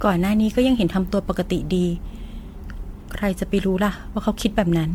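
Speech with generation loss throughout: swirly, hollow and smeared with blurred attacks, beyond what single 96 kbit/s MP3 coding would give, likely from about seven repeated MP3 passes.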